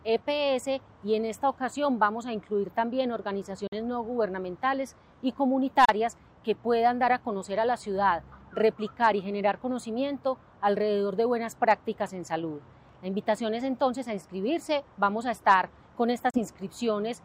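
At 3.67 s the sound cuts to silence and returns at 3.75 s. It happens again from 5.85 to 5.90 s, and from 16.30 to 16.38 s. When the sound returns, it has moved on, as if it kept playing through the hole. This is a Bluetooth dropout, likely caused by packets reaching the headphones too late and being discarded. The gaps fit two or three lost packets each.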